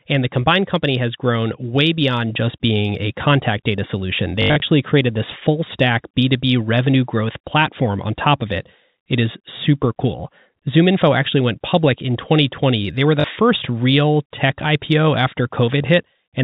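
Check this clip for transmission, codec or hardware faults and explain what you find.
Two short dropouts of the packet loss with last packet repeated kind occur, heard over the narrowband G.711 telephone coding that caps the sound at 4 kHz. The first runs from 4.42 to 4.62 s, between "a contact data solution" and "created this full stack": 140 ms lost across 200 ms, longest run 80 ms. The second, 13.20 to 13.24 s, sits between "were the" and "first real tech". Missing packets were replaced by replaying the previous one. The repeated runs stutter robotically, buzzing near 50 Hz, which fits 20 ms packets.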